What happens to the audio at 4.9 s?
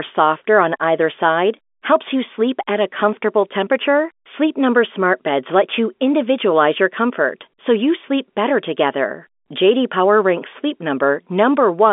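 Nothing goes wrong at 4.9 s: the speech carries on intact through that moment, heard through the same narrow telephone band as the rest of the line.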